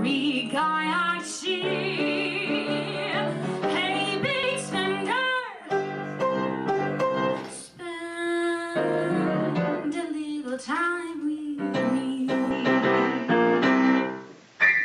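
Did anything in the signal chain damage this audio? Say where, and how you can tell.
Yes. At 4.43 s the codec stage drops compressed frames: about one 32 ms frame, roughly 30 ms of audio, goes missing and the sound jumps ahead.

From 12.51 s to the end, the capture device likely switched, with the input switched to a poorer device. Nothing passes above 7.6 kHz, the level shifts by about 5 dB, and new background noise sits roughly 35 dB below the signal. There is no gap at the switch.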